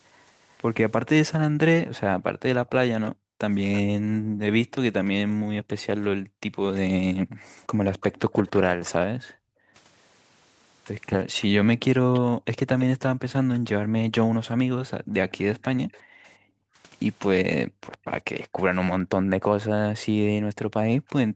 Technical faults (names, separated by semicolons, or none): echo leak; background gated by the echo canceller